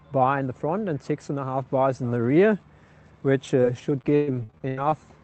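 From 3.47 to 4.94 s, repeated packet loss (robotic sound): eleven gaps up to 116 ms, each patched by extending prior audio, leaving choppy sound with pieces missing.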